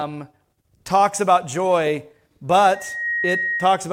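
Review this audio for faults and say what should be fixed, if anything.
Loudspeaker feedback squeal, 2.74 to 3.84 s: the mic-speaker loop gain exceeds one at 1.9 kHz, a swelling tone drawn as a bright horizontal spectrogram line. To prevent it, lower monitor gain, keep the microphone out of the loudspeaker's coverage, or notch 1.9 kHz.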